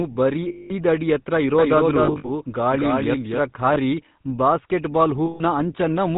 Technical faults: GSM full-rate codec; lost GSM frames; doubled audio track

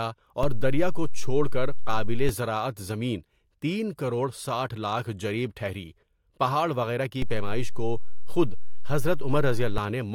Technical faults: DC step

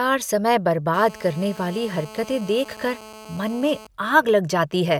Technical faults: GSM phone buzz

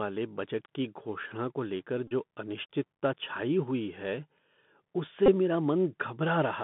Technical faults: Bluetooth CVSD headset codec; Bluetooth headset packet repeated

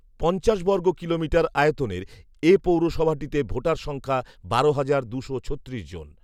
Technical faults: none

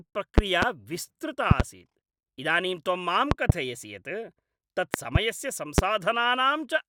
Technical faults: loud pop

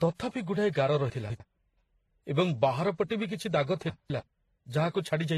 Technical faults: transcoding between lossy codecs; chunks out of order

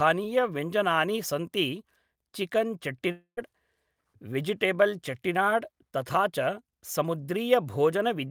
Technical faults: long network dropout

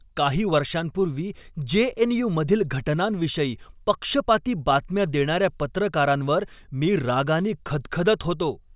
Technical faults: none

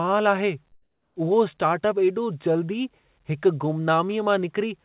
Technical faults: comfort noise in place of the background

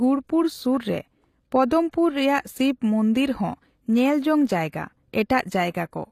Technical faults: HE-AAC compression

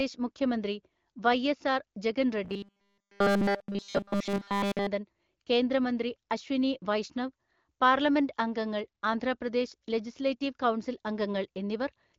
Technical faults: robotic sound from repeated short buffers

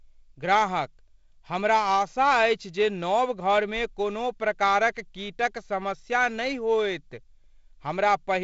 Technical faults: none

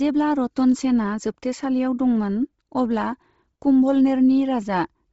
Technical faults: Bluetooth LC3 compression

